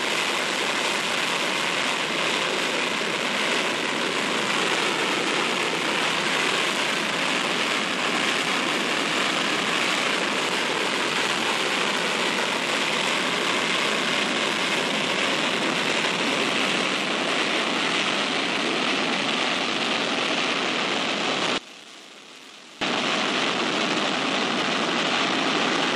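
From 21.58 to 22.81 s the summed level drops about 20 dB into a faint residue, likely one channel inverted, so shared centre content cancels in mono.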